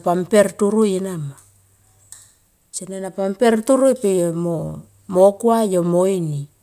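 No technical faults can be heard anywhere in this speech recording. Nothing in the audio calls for a timestamp or a repair.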